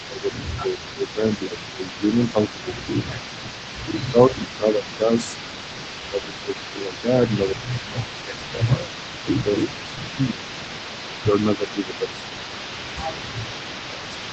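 Throughout the whole recording, an echo canceller at the far end likely failed to remove its loudspeaker pickup, so an echo leak returns the speech about 380 ms late, at about 15 dB below it. Speech suppressed in double talk then follows, likely because that canceller mistook overlapping talk for echo and turned the talker down. The speech dips and thins at 0.06 to 3.1 s, 3.94 to 8.7 s, 9.44 to 12.14 s, 13.07 to 13.32 s and 13.91 to 14.26 s, dropping by as much as roughly 15 dB.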